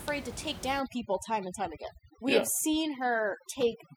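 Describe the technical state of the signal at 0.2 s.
At 0.2 s the signal is intact, with only the room's background noise audible at about 14 dB below the speech.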